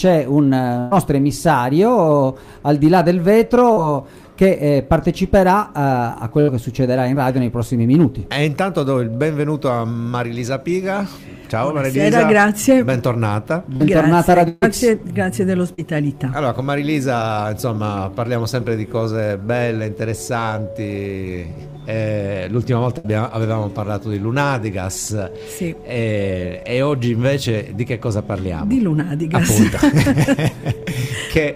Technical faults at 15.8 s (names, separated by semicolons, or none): short concealed packet loss